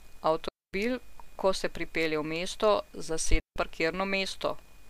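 At 0.48 s the speech drops into near silence for about 0.25 s, returning at 0.73 s. At 3.40 s a shorter hole of about 0.16 s follows, ending at 3.56 s. Both are digital wireless dropouts. The receiver lost too much data and muted with a quick fade. No noise burst surrounds either gap.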